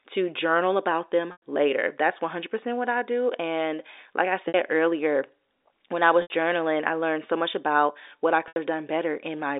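Packet loss with pitch repetition breaks the speech four times. The receiver lost stretches of audio and filled each gap by looping the last pitch period. After "to journal about" at 1.32 s, 100 ms goes missing. After "do and like I" at 4.48 s, 60 ms is lost. After "when I" at 6.22 s, 80 ms drops before "journaling I learned so", and another 80 ms goes at 8.48 s. Each gap sounds like a brief buzzy hold that fades away, heard over the narrow telephone band of the G.711 line.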